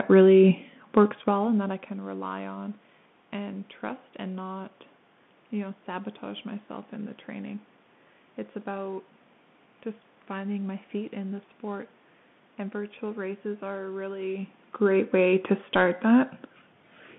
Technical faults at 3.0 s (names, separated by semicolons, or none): Bluetooth CVSD headset codec